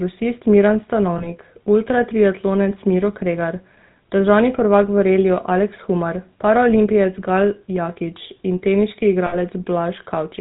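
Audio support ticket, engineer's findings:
GSM full-rate codec, whole clip: buzzy, gravelly speech, no content above 4 kHz. Pulse-excited vocal-tract model, excitation thinned to every third sample; fits 13 kbps full rate.

Lost GSM frames, 1.18–1.27 s and 9.26–9.36 s: brief rough metallic ring as last good frame repeats; gaps of about 20 ms and 60 ms.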